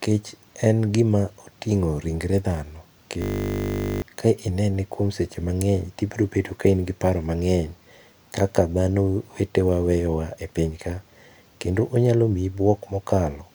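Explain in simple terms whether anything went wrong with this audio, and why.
Something did go wrong. From 3.22 to 4.02 seconds the speech turns into a steady buzz. This is a system hang loop. The computer stalled, but the sound hardware kept replaying the same tiny slice of audio. That slice is 20 ms long, so it repeats 50 times a second. That rate is the buzz you hear. It fits a 20 ms playback buffer. The real speech during that stretch is gone, roughly 0.7 seconds of it.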